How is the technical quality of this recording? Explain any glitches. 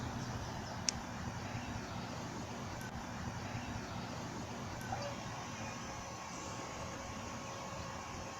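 The recording has one glitch: a stream segment repeated. From 2.89 s to 4.89 s, two seconds of audio play a second time. The player queued the same chunk twice. There is a small blip at the jump back, then the passage repeats.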